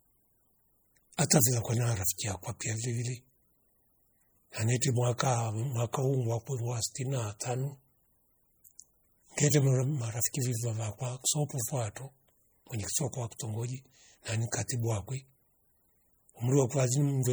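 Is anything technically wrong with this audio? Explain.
Yes. Throughout the speech there is a plainly audible watery, swirling quality, with chirpy s sounds and smeared attacks, and nothing above 21.1 kHz. This is likely MP3 compression at a low bitrate, about 48 kbps, where weak frequency lines flicker on and off between frames.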